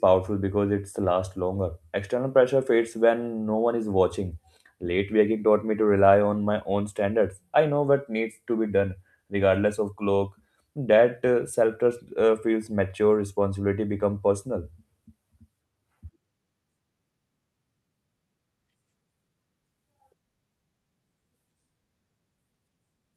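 No technical faults can be heard anywhere in the recording. There is no moment in the speech that a listener would need to mark with a time.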